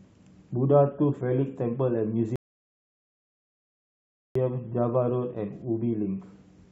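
At 2.36 s the speech drops into dead silence and only picks back up at 4.35 s. That's a rebuffering stall: the player ran dry and waited about 2.0 s for more data, then carried on exactly where it stopped, so nothing's missing, just delayed.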